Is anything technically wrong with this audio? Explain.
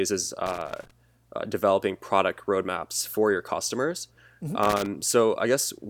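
Yes. Loose connector crackle appears twice in this speech, from 0.46 to 0.91 s, just before "uh developing product roadmaps", and from 4.63 to 4.86 s. A worn contact keeps breaking and remaking. The signal gets chopped. It sounds like irregular scratchy crackle.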